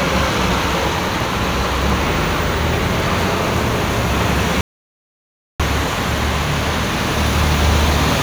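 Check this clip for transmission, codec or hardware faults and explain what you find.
One fault shows up. Audio dropout to silence, 4.61 to 5.60 s: the input was likely lost through a disconnect or mute, leaving about 0.99 s of silence, no room tone, before sound resumes.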